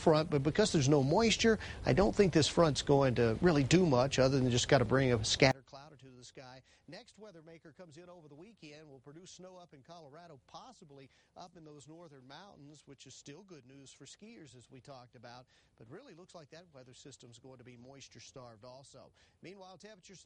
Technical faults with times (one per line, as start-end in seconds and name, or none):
5.51-20.25 one channel inverted